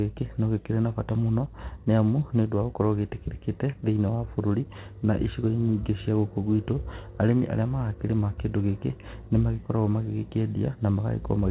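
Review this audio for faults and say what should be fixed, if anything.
Nothing here needs fixing. The speech has come through a call path with nothing above about 4 kHz, a narrowband sound consistent with G.711 mu-law at 64 kbps, and that path is working as expected.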